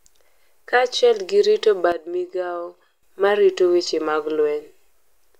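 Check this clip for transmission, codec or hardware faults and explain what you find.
There's one fault here, a sudden gain jump. At 1.92 s the level of the speech drops abruptly by about 10 dB and stays down until 3.03 s, when it snaps back up. The background noise falls and recovers right along with the talker, which tells you it's the whole signal being scaled. The likely cause is a digital gain setting applied instantly from one sample to the next, with no ramp.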